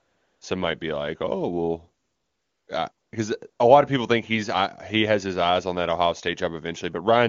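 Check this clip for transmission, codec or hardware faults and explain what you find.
One fault is present: AMR comfort noise, in four stretches. The first runs from 0.00 to 0.41 s, ending just before "some might be like". The next runs from 2.03 to 2.67 s, just before "because uh a lot". The shortest two are at 2.91 to 3.11 s and at 3.49 to 3.59 s, the last falling between "because uh" and "a lot of people". In each, the phone judged the talker silent and stopped sending speech frames. The receiver then substituted synthetic noise built from a rough level and spectral description. The real background is replaced by smooth, steady noise that switches in and out at these boundaries. The speech itself has the clarity of AMR wideband coding at a high rate, which fits 23.85 kbit/s.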